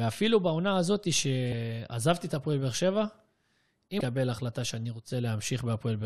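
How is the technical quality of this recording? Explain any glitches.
One glitch is audible in this speech recording, from 3.97 to 4.01 s: damaged data in a compressed stream. Part of the encoded stream is corrupt there, so the decoder misreads or discards those frames and resynchronises at the next valid frame header. The result is a brief break in the speech, about 34 ms long. On a waveform or spectrogram it shows as a short, abrupt discontinuity in the speech pattern between those two times.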